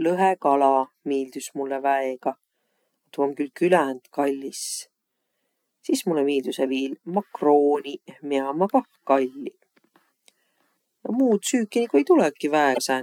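A speech recording with a brief garbled blip near its end, from 12.71 to 12.78 s, lasting about 70 ms. This is damaged data in a compressed stream: corrupted bytes made the decoder misread those frames and lose sync until it found the next valid frame header.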